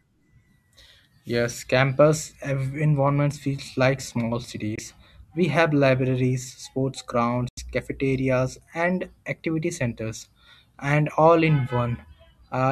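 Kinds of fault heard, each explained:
Bluetooth dropout: The speech cuts to silence twice, briefly at 4.75 to 4.79 s and longer at 7.49 to 7.59 s, then resumes as though it had kept playing. The likely cause is audio packets arriving late and being discarded, with about 21 ms and 85 ms of sound lost, consistent with one and four missing frames. The waveform shows flat gaps with abrupt or briefly faded edges, and the spectrogram shows clean vertical blank stripes across all frequencies.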